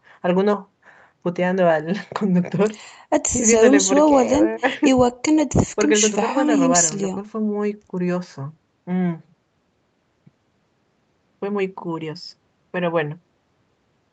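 Nothing technical stands out in this speech recording, which has been through a call's microphone processing that trims the deepest bass and leaves nothing above about 8 kHz, just as that kind of path normally does.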